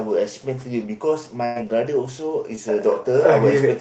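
From 1.45 to 1.57 s there is a burst of packet loss. About 100 ms of the speech never arrived in time. The receiver kept the last sound going for roughly 100 ms and let it fade. A voiced sound turns into a held buzz, while an unvoiced one becomes a dying hiss. There is no silence. The speech then picks up further along, and the stretch in between is simply gone.

From 2.55 to 2.59 s comes a short concealed packet loss. About 20 ms of audio failed to reach the decoder. The receiver patched roughly 14 ms of it by extending the preceding sound, then blended back into the real signal. The result is a brief smear or wobble. A short consonant here may drop out. Around both events, the call codec's coding noise and its cut-off near 8 kHz remain present.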